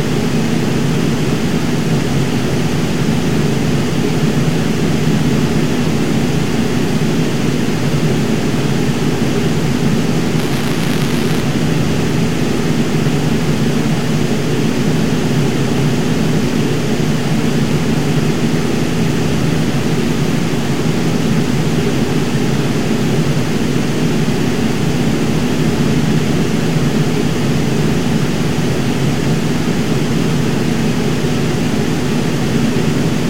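From 10.39 to 11.40 s the everyday sound picks up buffer tearing: a steady robotic buzz at 200 Hz, which fits a 5 ms buffer period. The writing program and the playback hardware have drifted so they meet inside each period, leaving a small sliver of every buffer filled with audio from about 20 ms earlier, hard-joined on both edges. Unlike random clicks or dropouts, the buzz is evenly pitched, has no silent gaps, and follows the signal.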